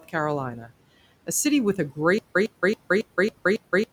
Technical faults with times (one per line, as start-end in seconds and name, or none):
0.56-0.71 speech cut by the noise suppressor
2.18-3.92 stutter with silent gaps